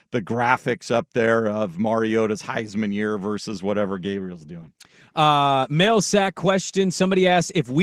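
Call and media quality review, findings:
Codec artefacts rise from 3.86 s to end, right after "mariota's heisman year versus". No gap. Adaptive stream at a lower bitrate, consistent with a 64 to 16 kbit/s Opus switch.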